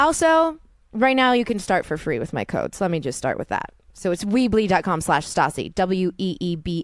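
No technical faults are audible.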